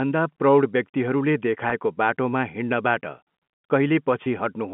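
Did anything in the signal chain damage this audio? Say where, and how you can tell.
Yes, at the network stage. Packet loss with pitch repetition occurs at 1.70 to 1.72 s and at 4.24 to 4.26 s. Each is a 20 ms gap, which fits one lost packet. The receiver filled each gap by repeating the last pitch period, so the speech briefly holds with a slight buzz before resuming over the telephone-band G.711 line.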